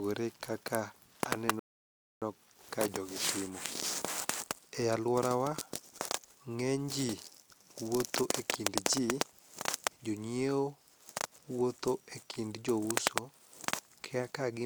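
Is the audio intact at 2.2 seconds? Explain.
No, 2.2 seconds falls inside a rebuffering stall running from 1.59 to 2.22 s. The player used up its downloaded audio and halted playback until more data arrived, so the speech drops abruptly to silence for about 0.62 s. Playback then picks up exactly where it stopped, at "ka jogi timo". No audio is lost, but the pause adds 624 ms to the clip's running time.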